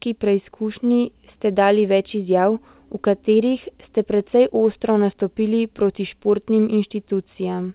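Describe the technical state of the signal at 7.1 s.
At 7.1 s the speech is intact, with no dropout, glitch or distortion, just the call path's steady narrowband sound with nothing above 4 kHz.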